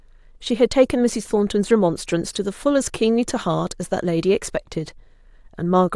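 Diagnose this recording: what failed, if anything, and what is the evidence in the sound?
Nothing failed: across the speech, no stage of the chain leaves any audible evidence of a fault.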